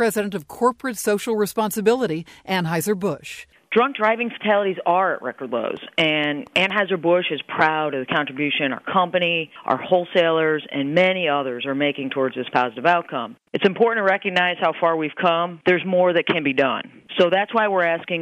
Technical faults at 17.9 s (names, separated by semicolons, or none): none